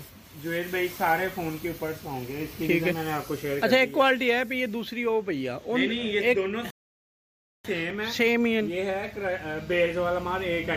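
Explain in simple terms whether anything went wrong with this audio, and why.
A playback stall occurs at 6.70 s: the sound cuts out mid-flow and stays silent for about 0.94 s, until 7.65 s. The player most likely ran short of data or was briefly blocked, so nothing reached the speakers until it caught up.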